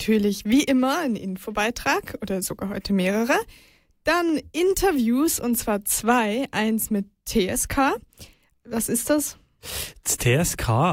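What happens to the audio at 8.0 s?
Nothing goes wrong at 8.0 s; the audio carries on intact through that moment, with no fault to be heard.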